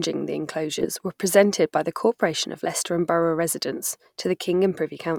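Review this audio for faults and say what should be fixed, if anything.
A Bluetooth stutter occurs from 0.80 to 0.86 s. A packet arrived late or not at all, so the receiver filled the gap by replaying its last buffered slice of audio instead of waiting in silence. That repeated slice gives a brief buzzy, machine-gun judder in the speech just before "were presented by the", and the sound then picks up further along as though it had never paused, with about 15 ms of audio skipped, which fits a single lost frame. To prevent it, keep the Bluetooth link short and clear of interference, or give the receiver a larger jitter buffer.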